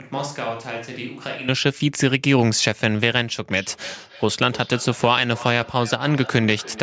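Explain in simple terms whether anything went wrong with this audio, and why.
Two things went wrong. From the very start until 1.48 s, the close microphone likely dropped out and a distant microphone was picked up instead. That switch to a distant microphone makes the sound roomy and hollow, noticeably quieter, with thinner bass and more background room noise, until it snaps back.

From 3.51 s to the end, there is feedback echo between two devices. A second device in the same room plays the call back, and the microphone catches it again. The sound returns as a faint, thin, ringing repeat about every third of a second.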